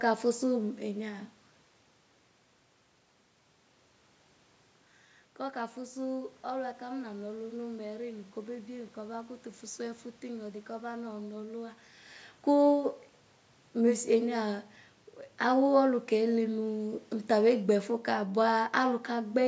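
No technical faults are audible.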